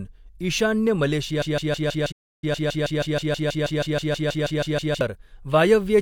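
At 1.42 s the speech falls into a broken-record loop: a fragment of about 160 ms repeats exactly, back to back, 22 times until 5.01 s, giving a rapid stuttering judder with no forward progress. The likely cause is that the player, encoder or stream stopped advancing and kept re-sending the last piece it held. Whatever should have been heard during those three and a half seconds is gone, and the speech resumes at 5.01 s.

Inside that loop, from 2.11 s to 2.44 s, there is a playback stall. The output drops to silence for about 308 ms, cutting the repetition off abruptly before it picks up again. This is likely the playback side briefly running dry of data or having its thread blocked, so nothing reached the output until it recovered.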